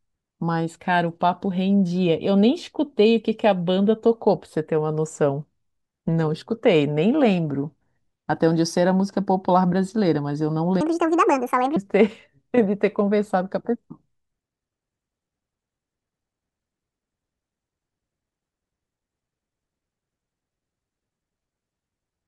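From 10.81 to 11.76 s the speech suddenly turns high and hurried, raised by roughly ten semitones, then snaps back. It is a section at the wrong speed, running 1.71 times too fast, likely because that stretch was played against the wrong clock.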